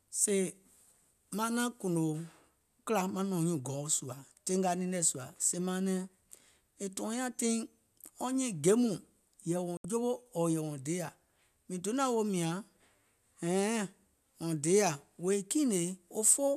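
Speech clip with one digital broadcast dropout: at 9.77 s the sound cuts out and only comes back at 9.85 s, leaving a hole of about 72 ms. That's the receiver losing the signal or getting frames that fail their checksum, then muting until clean frames arrive. The gap fits roughly three lost frames, and whatever was sent during that stretch is simply gone, so you can't recover it from this copy.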